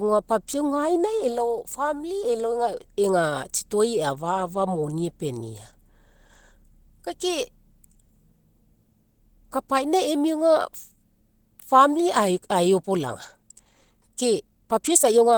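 From the start of the speech, the sound is hoarse, muffled and grainy, with plainly audible Opus compression damage, likely from the codec's hybrid speech mode at a low rate, around 16 kbps. A spectrogram shows energy reaching across the full band, with the upper bands filled by smeared noise rather than clean harmonics.

From 12.79 s to the end, a time-stretched section runs 1.35 times faster while the pitch holds. The sound turns rushed, likely because short pieces were dropped to shorten it. The waveform shows compressed, abruptly joined segments, and spectrogram harmonics stay level.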